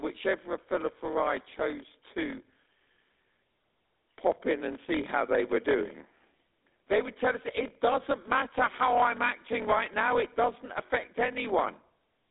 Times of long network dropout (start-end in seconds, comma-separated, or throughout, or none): none